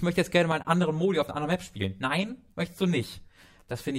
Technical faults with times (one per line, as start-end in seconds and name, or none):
0.52-3.99 channel delay (comb filtering)
0.63-0.65 AAC frame loss with muting